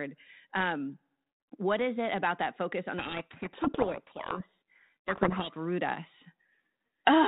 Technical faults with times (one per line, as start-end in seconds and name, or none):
2.98-5.55 codec payload misread